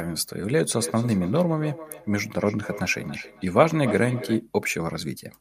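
A feedback echo between two devices, where one device replays the other's microphone, makes this speech repeat about every third of a second from 0.69 to 4.45 s, peaking about 13 dB below the speech.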